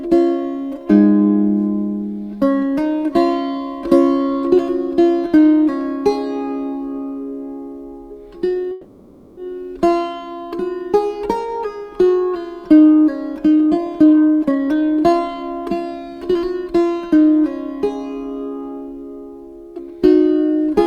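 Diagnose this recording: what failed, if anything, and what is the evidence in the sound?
Call audio freeze, 8.71 to 9.39 s. For about 0.66 s the last sound is stretched into a fading buzz-like fill instead of continuing, never dropping to true silence. When normal sound resumes it picks up exactly where it broke off, with nothing skipped, so the fill has simply pushed everything after it about 0.66 s later. The stage is the network: packets were likely held up in transit, and the receive jitter buffer ran dry until they arrived.

Jitter buffer speed-up, 13.56 to 15.44 s. Over this stretch the audio runs at about 135% of normal rate while keeping its pitch, giving a hurried, compressed feel. That is the receiver's jitter buffer draining excess delay, most plausibly the backlog from the earlier stall, by repeatedly cutting out short pitch-period-length slices. Across the roughly 1.9 s stretch, something like 0.7 s of audio is trimmed away.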